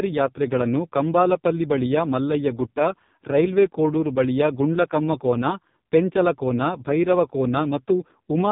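Speech runs through AMR narrowband mobile codec damage for the whole clip. Nothing above about 3.7 kHz survives, so the sound is thin and muffled. Damage is heavy, with a buzzy, synthetic quality that fits AMR-NB's lowest 4.75 kbps mode.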